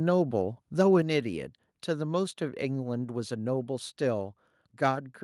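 A speech recording in which the input level was likely set too high for the converter, causing microphone overload from 0.80 to 0.97 s: peaks exceed full scale by about 2 dB, so a small fraction of samples are flattened at the ceiling and those loudest moments take on a harsh, crackly edge. Right afterward, at 1.02 s, the microphone volume is stepped down, likely by call software reacting to that clipping. Voice and background fall together by about 5 dB in a single abrupt drop rather than a smooth fade.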